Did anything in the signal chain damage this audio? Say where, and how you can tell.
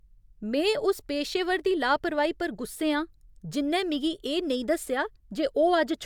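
No, nothing along the chain from capture to playback has left any audible damage on this speech recording, so there's nothing to point at here.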